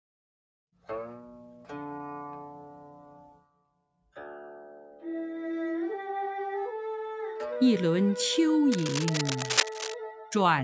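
From 3.35 to 4.16 s the noise suppressor mistook part of the sound for noise and pulled it down, by about 19 dB at its deepest, across most of that stretch.

Between 8.72 and 9.94 s there is dense, uneven scratching and rustling, roughly as loud as the sound itself. This is cable scratch noise, likely from a worn cable, connector or control being moved so its contact resistance jumps about rapidly.

At 10.13 to 10.32 s the suppressor acts again, dropping the sound by about 12 dB for roughly a fifth of a second, so it briefly dips away before recovering. The call microphone processing band-limits everything to 8 kHz, which is normal.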